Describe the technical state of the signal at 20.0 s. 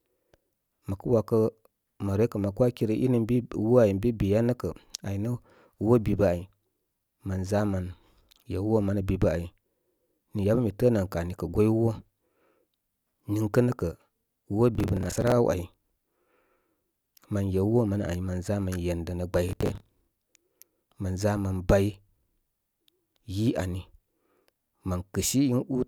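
At 20.0 s you're right inside a burst of processor overload crackle that runs from about 19.49 to 20.08 s. The processor couldn't keep up, so something like thirty short buffers missed their deadline again and again over that stretch. Each gap got patched by repeating a scrap of old audio, which fits a buffer of around 10 ms. All those hard-edged repeats stack into a gritty, tearing crackle over the speech, and it stops once the load clears.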